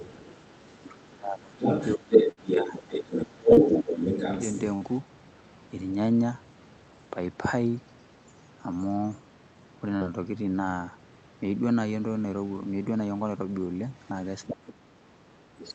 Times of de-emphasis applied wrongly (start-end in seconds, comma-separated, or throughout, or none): none